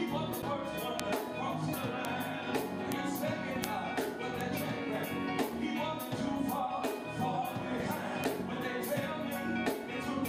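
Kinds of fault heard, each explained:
broken MP3 bit reservoir: At 0.41 to 0.44 s the sound skips ahead and a brief chirp, burst of noise or short hole fills about 30 ms, roughly one 26.1 ms frame. This is likely a frame missing from the MP3 stream, leaving the next frame to decode borrowed bytes that belong elsewhere.
bit error spike: Six isolated sharp ticks land at 1.00, 2.05, 2.92, 3.64, 4.41 and 8.24 s. Each is a broadband click unrelated to the surrounding sound. It fits one or a few samples with a flipped bit, so the value jumps by a power of two before returning.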